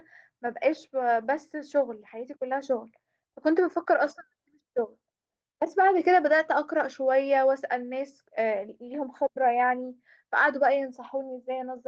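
At about 4.05 to 4.11 s there's a lost packet rebuilt from error correction: roughly 40 ms, which fits two 20 ms packets, came back from the low-bitrate copies in the following packets. So there's no gap, just a brief rougher, noisier patch in the speech.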